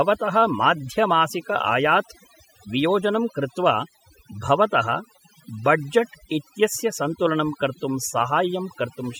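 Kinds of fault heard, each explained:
Overdone noise removal: a noise reduction process has been applied far too aggressively across the whole clip. Any frequency band sitting close to the estimated noise floor is pulled right down or muted outright, and quieter parts of the speech are caught along with the noise. Between phrases the background drops and breaks up into small twinkling, chirping specks, while the speech itself is stripped of its softer detail.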